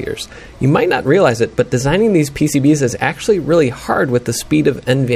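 No technical faults can be heard anywhere in the clip.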